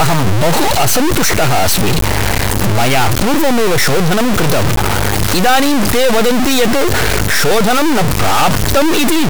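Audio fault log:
throughout, stuck bit: harsh buzzy distortion and loud noise in pauses, likely from one high data bit stuck, offsetting values by about -5 dBFS.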